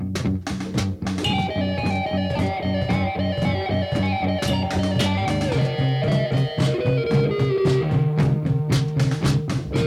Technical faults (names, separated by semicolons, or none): none